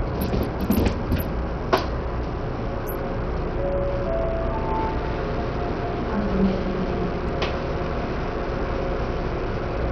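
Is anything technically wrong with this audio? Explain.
Yes. Throughout the clip there is heavy damage that sounds like Bluetooth SBC compression, the likely cause. Nothing is left above about 14.7 kHz. The remaining treble flickers in and out. A gritty, grainy noise clings to the sound, with aliasing riding on it. SBC splits the signal into a few broad frequency bands and shares out bits without modelling hearing. At this level of damage, which points to a low bitrate near 64 kbps, the top bands get nothing. The rest are quantised coarsely.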